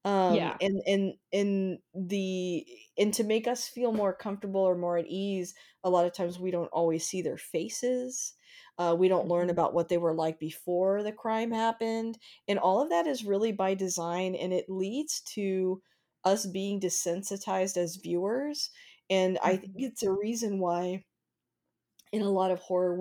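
No technical faults can be heard anywhere in the speech recording, with the signal holding steady throughout.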